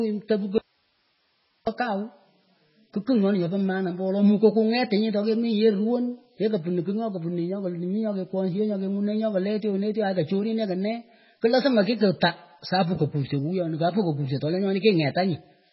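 From the first moment, the speech carries heavy MP3 compression damage. Nothing sounds above 5.6 kHz, so the treble is gone. Weak frequency lines flicker in and out, giving a watery, swirling texture and smeared consonants. That fits a very low bitrate, likely around 16 kbps.

At 0.58 s the speech cuts out abruptly, an audio dropout to a faint residue. For about 1.09 s, until 1.67 s, only hiss remains, roughly 40 dB below the speech. The likely cause is a lost signal while the path stayed live.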